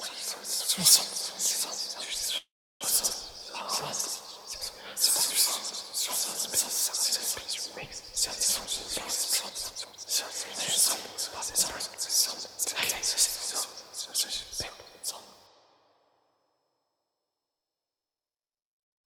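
From 2.37 to 2.83 s a call audio freeze stops the sound. The last fragment trails off as a fading buzz, then about 330 ms of silence, before playback resumes where it stopped. The likely cause is delayed packets draining the jitter buffer. A spectrogram shows a smeared, decaying band and then a blank column.

At 3.13 to 3.16 s a skip ahead drops roughly a tenth of a second of audio. The sound lurches forward with almost no gap. The waveform shows two unrelated stretches butted together, and the spectrogram shows a hard vertical seam.

From 3.32 to 4.59 s a jitter buffer slow-down stretches the sound to 92 % speed by repeating tiny pitch-period slices, adding 111 ms. Pitch holds, but it drags. The waveform shows near-identical cycles repeated in runs.

Jitter buffer speed-up trims short periodic slices to cut delay. It is sharp at 8.60 to 8.68 s (154 %, about 50 ms removed) and 9.49 to 10.05 s (148 %, about 300 ms), where the sound rushes audibly. 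It is gentle at 11.88 to 12.57 s (104 %) and 13.66 to 14.71 s (106 %). Spectrogram features look compressed in time, with pitch unchanged.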